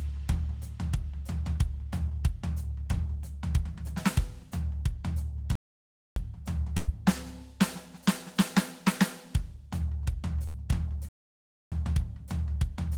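A music clip with two kinds of fault. A playback stall cuts the music to silence from 5.55 to 6.16 s and again from 11.09 to 11.72 s, roughly 0.6 s each, most likely because the player starved of data or its thread blocked, before the music continues. Bursts of packet loss at 6.77–6.90 s and 10.46–10.56 s are shorter, around 0.1 s, and are not silent: the last sound is smeared on and fades, then the music jumps ahead past the missing stretch.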